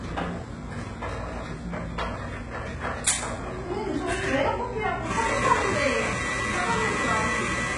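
From start to finish the top end sounds synthetic: the treble stays bright but has a gritty, metallic sheen that doesn't belong to the sound underneath, and nothing reaches above about 11.1 kHz. This is likely heavy HE-AAC compression, at a rate that points to roughly 12 kbps. Only the lower spectrum is genuinely coded, and the upper bands are copied up from below and shaped by a coarse envelope, so their harmonics fail to line up with the real ones.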